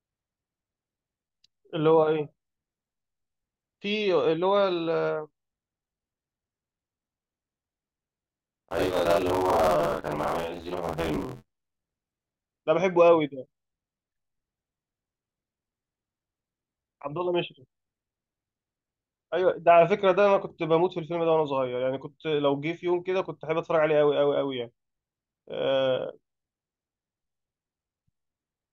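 Speech, with buffer tearing from 8.34 to 12.35 s: a rattling, robotic buzz at 86.1 Hz sits on the voiced sound and disappears in gaps. The writing and reading sides of the playback ring buffer have drifted into each other, so about half of each period replays audio from around 50 ms earlier, spliced with hard edges. The buzz rate fits a 512-sample buffer.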